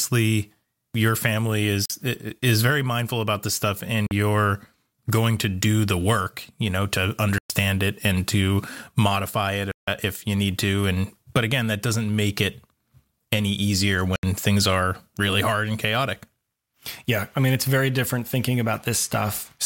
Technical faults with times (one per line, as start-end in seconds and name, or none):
1.85-1.90 Bluetooth dropout
4.07-4.11 Bluetooth dropout
7.38-7.50 Bluetooth dropout
9.71-9.88 Bluetooth dropout
14.16-14.23 Bluetooth dropout